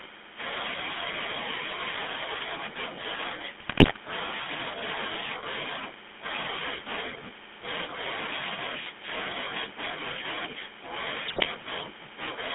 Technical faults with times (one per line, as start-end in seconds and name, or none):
0.00-12.54 GSM full-rate codec
3.60-3.98 GSM bit errors
11.28-11.47 GSM bit errors